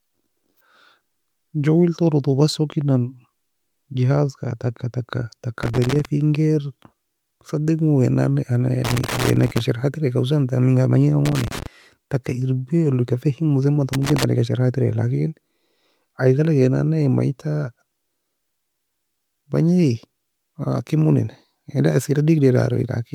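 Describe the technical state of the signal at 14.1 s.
At 14.1 s you're right in the middle of a loose connector crackle, running from about 13.93 to 14.24 s, just after "leka fehimosaie enbata". A worn contact is making and breaking, chopping the speech, so you get a short, irregular burst of scratchy crackle.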